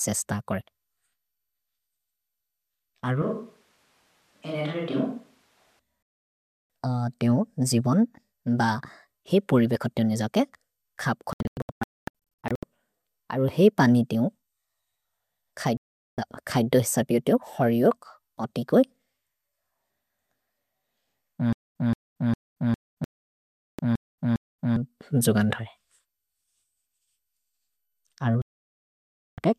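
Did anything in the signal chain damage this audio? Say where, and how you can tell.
Yes. From 3.22 to 5.79 s the speech suddenly turns roomy and hollow, with thinner bass, a drop of roughly 10 dB, and room noise sitting only about 35 dB under the speech. It snaps back just as abruptly. That pattern points to a switch to a distant microphone at the capture stage. The close microphone's feed most likely dropped out, and a far pickup that hears more of the room was used in its place.

Digital broadcast dropout shows up as the sound muting to silence and then resuming further on, with the missing stretch gone. It happens at 6.26 s, then as several short holes scattered between 11.33 and 12.63 s (the longest about 240 ms), and again at 15.77 to 16.18 s, 23.04 to 23.79 s and 28.42 to 29.38 s. At the reception stage, the receiver stopped getting usable frames and muted until clean ones arrived.

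Between 21.53 and 24.76 s, a 173 ms burst of the same sound plays eight times, each followed by 231 ms of dead digital silence, so it repeats every 405 ms. This is a stutter with silent gaps at the playback or buffering stage. The player most likely stalled and replayed its last fragment on each retry before running empty, so the speech that belonged in that span is lost.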